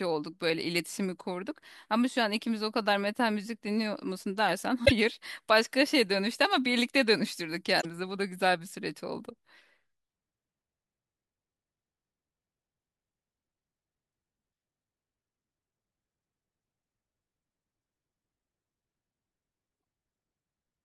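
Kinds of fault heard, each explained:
Damaged data in a compressed stream: Corrupted bytes make the decoder misread frames and lose sync. Brief glitches break the speech near 4.8, 7.8 and 19.8 seconds.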